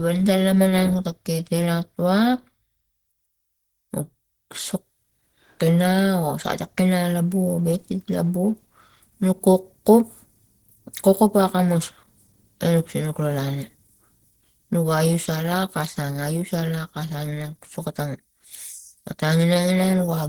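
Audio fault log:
throughout, Opus compression: the speech carries a plainly audible hoarse, grainy roughness, and the upper range sounds filled in rather than finely detailed, even though content still reaches about 20.2 kHz. The sound points to a low-rate encode, likely Opus at a rate that fits around 16 kbps in its hybrid mode. There a speech coder handles the lower band, and the upper bands are rebuilt from coarse energy values with folded or noise-like fill, so the damage is roughness rather than swirling gaps.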